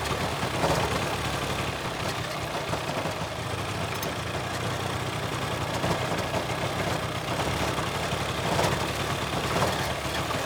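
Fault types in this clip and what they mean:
Buffer tearing: the ring buffer's writer and reader have slipped, splicing a sliver of audio about a tenth of a second old into each period. From 1.02 to 2.19 s this makes a 21.5 Hz rattle, fitting a 2048-sample buffer. The waveform shows regular hard steps; the spectrogram shows evenly spaced vertical click lines.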